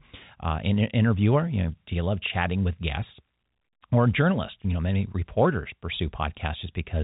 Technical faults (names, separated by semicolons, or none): none